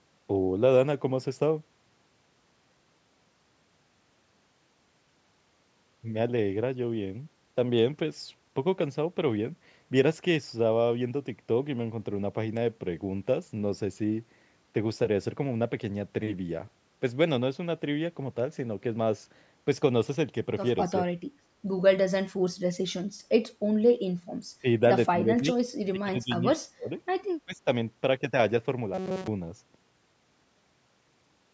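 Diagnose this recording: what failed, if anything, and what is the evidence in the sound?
Call processing stage: speech suppressed in double talk at 21.1, 24.6, 25.1, 25.9 and 27.5 s, with dips up to about 35 dB. The echo canceller likely ducked during crosstalk.

Driver or buffer stage: robotic sound from repeated short buffers at 28.94 to 29.27 s. It's a rigid 188 Hz buzz, which fits a buffer of about 5.3 ms likely being replayed for most of that stretch.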